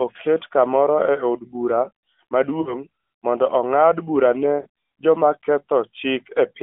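At 2.62 to 2.79 s, just before "' mondo ong'ad bura", and at 4.62 to 4.67 s, right after "mondo ong'ad bura ne", lost AMR speech frames drop about 40 ms each. The decoder repeats stale pitch and vocal-tract settings with falling gain, so the sound smears and fades briefly. A spectrogram shows frozen, decaying harmonics below 3.4 kHz, and the waveform shows a shrinking envelope.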